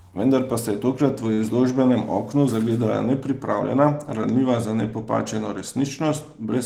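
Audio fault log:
1.33–1.40 s, short stall from a late packet: a packet of this speech arrived late, the jitter buffer ran dry, and the receiver bridged the gap by stretching the last sound for about 46 ms until the data caught up. Nothing is lost; playback resumes from exactly where it paused, so everything after runs 46 ms later than before. The effect is one sound held slightly too long, with a faint buzzy or dipped quality where the fill sits.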